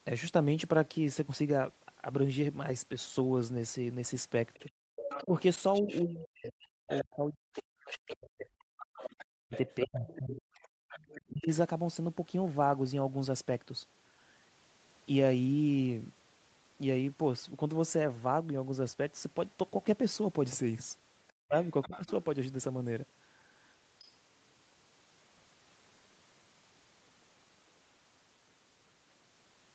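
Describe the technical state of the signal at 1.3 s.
At 1.3 s the speech is intact, with no fault; it carries only the normal sound of a call path, its highs stopping at about 8 kHz and its lowest bass trimmed by the microphone processing.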